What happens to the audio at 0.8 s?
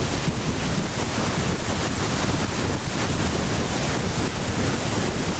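At 0.8 s there is gain pumping, present throughout: the gain swings around 5 dB, pulled down under loud sounds, likely from excessive gain hitting a fast limiter, unlike a gate's abrupt cut to silence.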